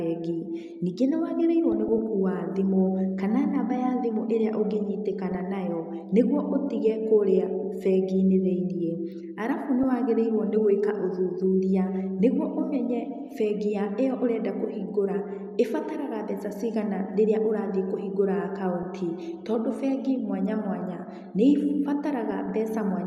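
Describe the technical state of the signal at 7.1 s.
MP2 compression artefacts are plainly audible at 7.1 s and throughout, likely from a low rate near 80 kbps that starves the upper sub-bands, leaving the speech dull and gurgling.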